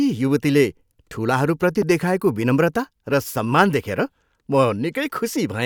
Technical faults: loud pop

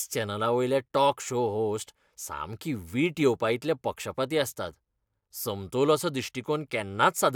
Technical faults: none

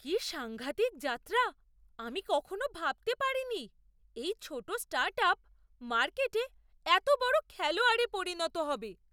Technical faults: none

